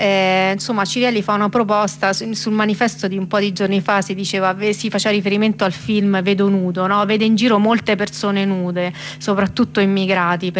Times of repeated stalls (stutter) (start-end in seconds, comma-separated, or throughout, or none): none